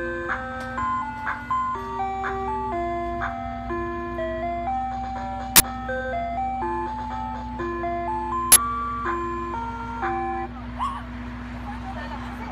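An uninitialised buffer fault breaks into this audio twice, at 5.56 s and again at 8.52 s, each time as a harsh burst of digital noise lasting about 40 ms. Both bursts point to a block of output being sent to playback before any audio had been written into it, so whatever stale data sat in that memory was played as if it were sound. The matching 40 ms length suggests the same buffer size failing both times.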